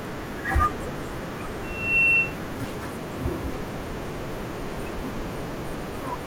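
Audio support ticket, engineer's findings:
Loudspeaker feedback squeal, 1.63–2.37 s: 2.7 kHz tone swells over roughly 0.3 s to about 10 dB above the speech. Mic picking up its own speaker, loop gain above one.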